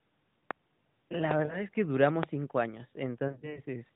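Lost AMR speech frames occur at 1.46 to 1.65 s and again at 3.28 to 3.60 s, through a narrowband channel with nothing above 4 kHz. When a frame failed its checksum, the decoder repeated the last good pitch and vocal tract settings at falling gain. The first event hides 40 ms, fitting two frames, as a short warbling dip. The second loses 140 ms scattered over 280 ms in runs up to 40 ms, giving repeated smeared stutters before the sound recovers.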